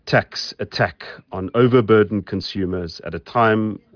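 No technical faults can be heard anywhere in this clip.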